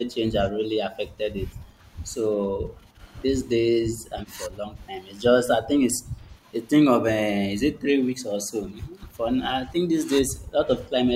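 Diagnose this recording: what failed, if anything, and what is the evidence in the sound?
Call processing failed with speech suppressed in double talk, likely an echo canceller ducking the near talker. Dips of about 10 dB (about 5 dB at 7.73–8.98 s) occur at 0.5–1.78, 2.38–2.99, 3.91–4.76, 5.62–6.43 and 9.7–11.07 s. They show as notched waveform envelopes and briefly faded spectrogram patches.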